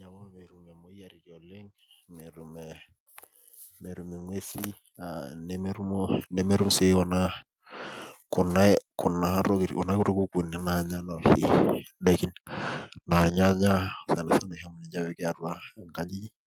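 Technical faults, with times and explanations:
0.81–2.91 s and 3.93–6.63 s, automatic gain rising: twice the gain control judges the input too quiet and lifts it by about 8 dB, over 2.1 s and then 2.7 s. Voice and background swell together, unlike a single loudening source.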